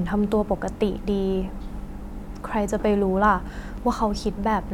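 A speech recording with repeated frames at 0.77 to 0.79 s: a 23.2 ms block, consistent with a single compressed frame, plays twice, causing a brief stutter and adding 23.2 ms. A spectrogram shows an identical slice duplicated.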